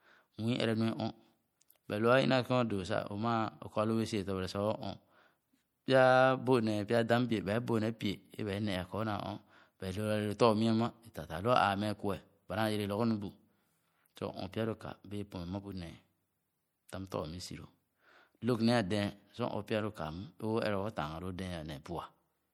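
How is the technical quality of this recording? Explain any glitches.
The quality is compromised throughout. The speech sounds watery and swirly from start to finish, with smeared attacks and metallic chirps on s sounds. This is likely MP3 compression, consistent with about 64 kbps, where weak frequency lines drop in and out between frames.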